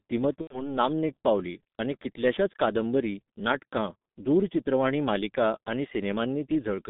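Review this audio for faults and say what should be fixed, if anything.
Throughout the clip the speech sounds muffled and hoarse, with consonants smeared together and nothing above about 3.7 kHz or below about 150 Hz. This is G.723.1 codec damage, and it is heavy. The codec packs speech into 30 ms frames at a very low rate, which fits roughly 6.3 kbit/s. It refreshes its vocal-tract model too slowly to track fast consonant transitions. To prevent it, use a wideband codec such as Opus at a higher bitrate.

From 0.41 to 0.72 s the speech gives way to a stretched sound that fades out, and the voice stays weak or distorted for a moment after it returns. This is VoIP packet loss concealed by the speech codec. About 90 ms of audio was lost, which fits three consecutive 30 ms frames. The decoder kept repeating its last pitch and filter at falling gain, and because each frame depends on the one before, recovery lagged. 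To prevent it, add a jitter buffer with forward error correction or packet redundancy.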